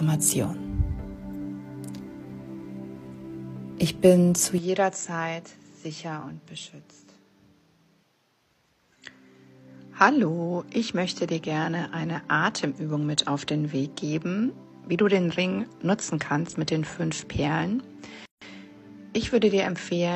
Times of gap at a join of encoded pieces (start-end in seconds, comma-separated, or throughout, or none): 18.25-18.42